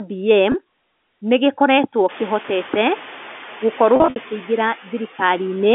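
Noise suppressor artifacts run through the whole clip, though they're mild. The suppressor only pulls what it takes for steady noise down by about 2 dB, so the background dips a little in the gaps and comes back up under the speech. That small pumping is easier to hear once the room noise rises, roughly around two seconds in. There it sits about 19 dB under the speech, with the usual telephone band limit on top.

Packet loss with pitch repetition shows up at 0.52 s and again at 2.42 s. Each time about 20 ms goes missing, which fits a single lost packet. The receiver covers the hole by repeating the last pitch cycle, so you get a brief held, slightly buzzy blip rather than a gap. The rougher patch is from 3.96 to 4.16 s. About 140 ms is lost, scattered across those 200 ms, and the longest run is 60 ms. That run outlasts the roughly 50 ms fade on the repeated cycle, so it buzzes, drops nearly to silence, then cross-fades back in.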